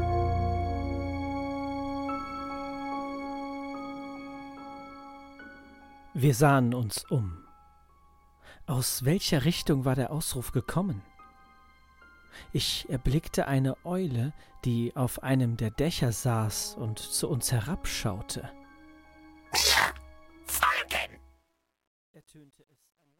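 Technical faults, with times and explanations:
20.56–23.2 s, truncation distortion on the fade: the gain stage on the fade-out keeps too few bits, roughly 11, and adds no dither. From about 21.62 s the tail turns into coarse square steps, so it gets gritty.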